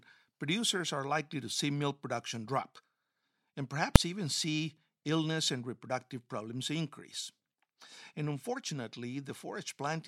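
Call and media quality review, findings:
Single loud bang at 3.96 s, just before "even see illness and". Invalid numbers at full scale: a DSP stage produced infinite or invalid values, clamped to maximum output for one block of about 2.67 ms, which fits a 128-sample processing block. The block is too short to hear a separate start and end pop or any gap between them, so it comes through as one bang.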